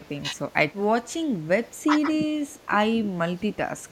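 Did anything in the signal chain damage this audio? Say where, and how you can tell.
Yes, in call processing. The speech dips at 1.23, 1.64, 1.86 and 3.66 s, in brief, shallow-to-moderate dips. The deepest cut, roughly 20 dB, lasts about 0.4 s from 2.29 to 2.71 s. This is likely speech suppressed in double talk, with the echo canceller ducking the talker.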